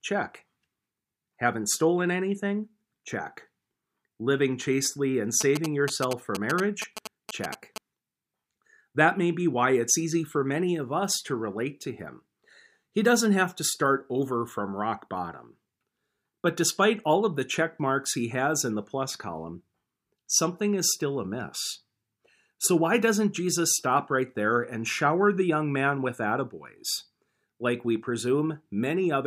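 From 5.41 to 7.78 s, just after "chastely and", GSM signalling bursts break into the speech. A nearby 2G phone is sending brief groups of radio bursts, as it does when it signals before a call or text. The audio circuitry rectifies that RF and turns it into a galloping dit-dit-dit of short buzzes at a 217 Hz repetition rate. The buzzing sits only a few decibels below the speech.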